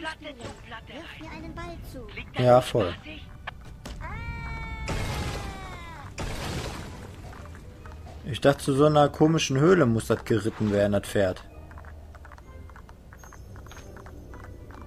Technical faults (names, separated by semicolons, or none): none